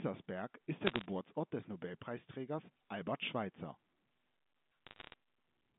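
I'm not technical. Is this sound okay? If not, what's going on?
No. Two short bursts of bit errors on a digital phone line, from 0.87 to 1.06 s and from 4.87 to 5.14 s, cause crackle. On the digital telephone link, a small fraction of bits, under one percent, arrived flipped. Each one corrupts a single sample, and a flip in a high bit comes out as a sharp tick over the speech.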